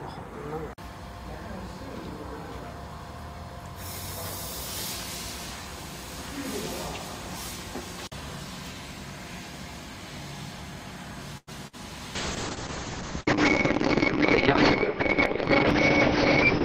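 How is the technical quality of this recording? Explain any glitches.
The recording runs into trouble near the end, with three network-related glitches packed into the last five seconds.

At 11.37 to 11.49 s there's a short stall from a late packet. A packet showed up about 99 ms behind schedule, the jitter buffer ran dry, and the receiver held the last bit of sound to cover the wait. Nothing is actually lost. Playback picks up right where it left off, but that moment hangs a touch too long, with a faint buzzy or dipped quality, and everything after it lands roughly 0.1 s later.

At 11.67 to 11.75 s comes a burst of packet loss, and this one does drop material. About 60 ms of audio never made it. The receiver papered over the hole by extending the previous sound for around 57 ms while fading it down, so you hear a brief held buzz or hiss that tails off. Then the audio jumps ahead, with the bit in between simply gone.

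From 12.16 s to the end there's a call bitrate drop. The bandwidth estimate collapsed, and the encoder went from what sounds like roughly 40 kbps down to something near 6 kbps, sitting at the bottom for nearly 4 s. At that rate Opus codes much more coarsely and throws away the top end, so the range shrinks from about 20 kHz to 6 kHz. The result is muffled, rough and a bit watery, and it never recovers before the clip ends.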